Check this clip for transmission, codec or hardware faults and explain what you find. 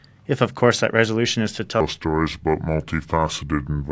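One fault is present, a wrong sample rate. From 1.81 s, right after "that resolution is to", to the end at 3.92 s, samples play back slower than they were captured, with no conversion. This fits 22 kHz audio played at 16 kHz. Speed drops to 0.726 times and pitch falls about 5.5 semitones, so the speech sounds low, slow and dragged.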